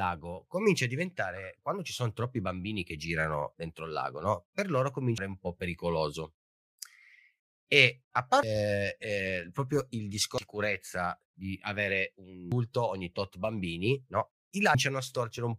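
At 5.18 s the speech gets hit by a quick glitch, and it happens again at 8.43 s just before "eh proprio il", at 10.38 s right after "eh proprio il", at 12.52 s after "di avere", and at 14.75 s. That's damaged data in a compressed stream: bytes in the encoded file got corrupted, so the decoder misreads those frames, loses sync and hunts for the next frame header, leaving a brief glitch each time.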